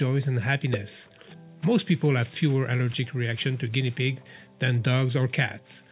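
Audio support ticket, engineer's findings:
No audible faults found in the signal on review, with nothing in it pointing to a failing component in the capture or playback path.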